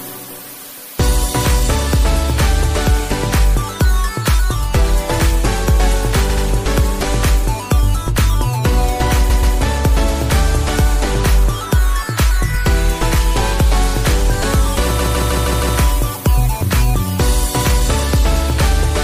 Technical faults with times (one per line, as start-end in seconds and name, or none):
0.00-19.04 MP3 compression
6.29-6.44 repeated frames
9.29-9.55 repeated frames
14.98-15.77 repeated frames